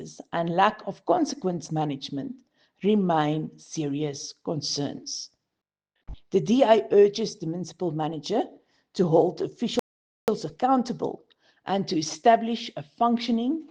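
The player's buffer ran dry at 9.79 s, producing a rebuffering stall: playback halts into silence until 10.28 s, then picks up exactly where it stopped. No audio is lost, but the pause adds about 485 ms to the running time.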